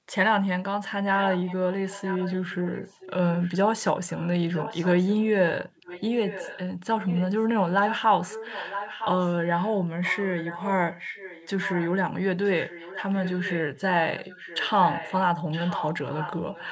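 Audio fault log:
1.15–3.81, 4.15–5.24, 5.77–6.60, 7.01–7.44, 7.86–11.91, 12.44–13.80, 14.16–15.16 and 15.51 s to the end: echo leak. A fainter copy of the speech follows it 0.96 s later, about 10 to 15 dB down. It is likely a loudspeaker's output picked up by the microphone, which the echo canceller failed to remove and sent back.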